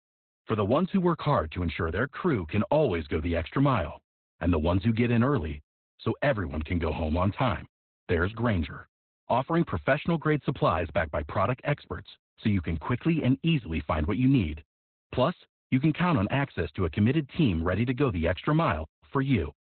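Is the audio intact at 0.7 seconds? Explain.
No. At 0.7 seconds the speech is already carrying Opus voice compression, which runs the whole length of the clip. The coder is working in its SILK linear-prediction mode at narrowband, so nothing is left above about 4.3 kHz, and the excitation is coded coarsely, which fits a bitrate around 8 kbps. The result is muffled, hoarse and slightly robotic. Unlike a simple low-pass filter, which would only dull the sound, this adds a rough, synthetic texture.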